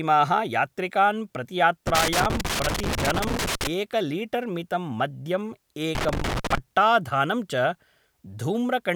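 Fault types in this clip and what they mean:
Loose connector crackle: A worn or dirty contact in the signal path keeps making and breaking as it shifts. Each break chops the speech, and any DC on the line turns the gaps into pops. Here it comes in two irregular bursts of scratchy crackle. The first runs from about 1.87 s to 3.67 s, nearly two seconds long. The second is shorter, from 5.95 s to 6.58 s.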